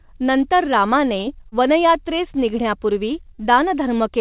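Short concealed packet loss hits this speech twice, at 1.49 to 1.55 s and 3.35 to 3.41 s. Each time about 30 ms of audio arrived too late, and the receiver patched the gap by extending the preceding sound before blending back, leaving a brief smear or wobble. The call path's narrowband coding, with nothing above 4 kHz, fits G.711.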